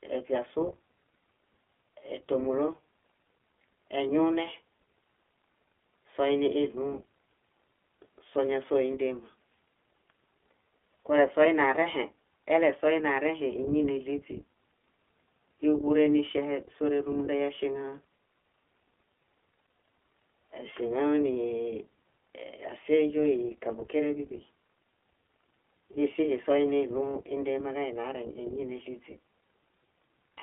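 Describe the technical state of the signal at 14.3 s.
At 14.3 s, as across the whole clip, the speech shows iLBC codec damage. Each 20 ms frame is coded independently within a 300 Hz to 3.4 kHz band, giving plainly rough, synthetic speech consistent with a 15.2 kbps mode.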